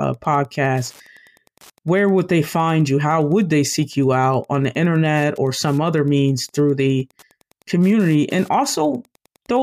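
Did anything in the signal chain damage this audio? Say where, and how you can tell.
Yes. Wi-Fi interference runs through the whole clip as a faint, steady ticking under the speech, repeating every 102.4 ms, just under ten times a second, and sitting roughly 35 dB below the signal. The damage is in the analogue wiring stage: a nearby Wi-Fi radio's beacon bursts are picked up by the audio circuit and rectified, turning each radio pulse into an audible click at the beacon's repetition rate.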